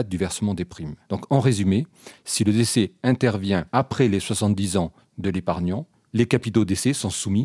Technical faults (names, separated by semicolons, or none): none